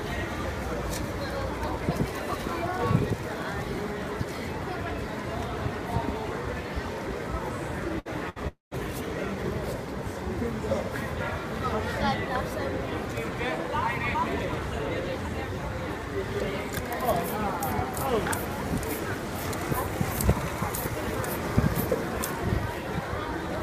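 At 7.99 and again at 8.29 s you get a burst of packet loss: about 60 ms goes missing each time, and the receiver papers over it by stretching the last bit of sound into a short, fading buzz or hiss before jumping ahead. Right after, from 8.48 to 8.74 s, there's what's likely a long network dropout. Roughly 240 ms never arrives, the concealment fill fades away, about 150 ms of near-silence follows, and the audio resumes past the lost part.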